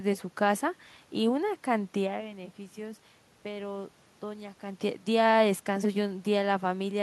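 Nothing stood out on listening; the room noise and the level shifts near 2 s and 4.5 s, as the talker moves relative to the microphone, belong to the recording itself.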